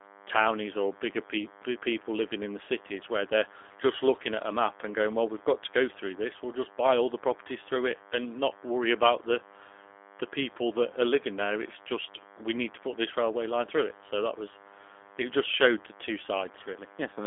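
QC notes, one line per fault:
throughout, DECT cordless phone buzz: a thin, steady buzz sits under the speech for the whole clip, pitched at 100 Hz and edged with a long chain of harmonics that make it sound raspy, not humming. It runs well below the talker, roughly 25 dB down. The 100 Hz rate matches a DECT handset or base station firing a radio burst every 10 ms, which the audio circuitry rectifies into this pulse train.
throughout, G.729 codec: the speech is intelligible but rough and slightly synthetic, with plainly audible coding damage and a narrow, boxed-in tone. The band runs from about 250 Hz to 3.5 kHz, and nothing comes through above 3.7 kHz, so sibilants lose their sharpness. The sound points to an 8 kbit/s G.729A link, which rebuilds each 10 ms frame from a vocal-tract model and a few excitation pulses rather than the actual waveform.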